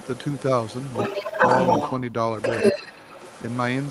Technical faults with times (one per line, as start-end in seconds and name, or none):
0.00-1.93 other side's voice leaking through
1.17-1.34 speech suppressed in double talk
2.35-3.90 other side's voice leaking through